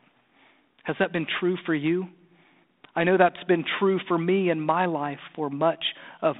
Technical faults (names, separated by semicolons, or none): none